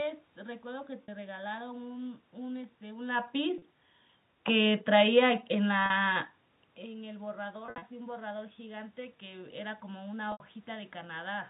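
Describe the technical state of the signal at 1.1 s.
Just before 1.1 s, from 1.04 to 1.08 s, the speech briefly hangs on a slightly held, buzzy tone. This is packet loss with pitch repetition: about 40 ms of audio, which fits two lost packets, was bridged by repeating the last pitch period.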